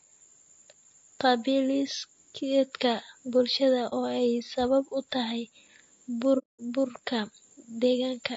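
Throughout, the speech sounds rough and grainy, with noise filling the gaps between harmonics and a thin, synthetic top band. This is likely low-delay AAC compression at a low bitrate, around 32 kbps. Its short frames resolve pitch poorly, which sets it apart from ordinary wideband coding smear. At 3.89 s, just after "qaabdhismeedka bulshada", comes AAC frame loss with muting: a brief dip of about 30 ms. A second hole runs from 6.38 to 6.60 s, about 210 ms, which fits several consecutive lost frames. In both, the decoder silenced the missing spectrum, and the overlapping windows fade the sound out and back in, unlike a hard dropout.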